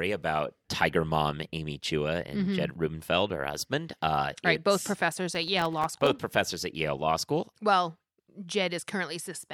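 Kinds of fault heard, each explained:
Processor overload crackle: The processor fell behind and missed many tiny buffer deadlines in a row. From 5.32 to 6.07 s, around thirty sub-millisecond gaps of silence break into the speech. Their hard edges make a gritty crackle that stops once the load passes.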